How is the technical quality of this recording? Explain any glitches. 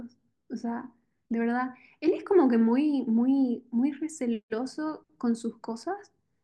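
The recording has one clear glitch. From 1.3 to 4.0 s, a regular ticking runs under the speech ten times a second, audible only while sound is present. The cause is a resampler restarted on every block. Each 100 ms block was converted alone, which fits a 44.1 kHz to 48 kHz change, so the converter lacked neighbouring samples at every edge and left a small error there.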